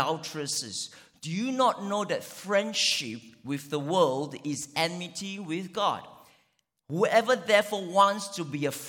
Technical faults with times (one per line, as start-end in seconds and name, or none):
none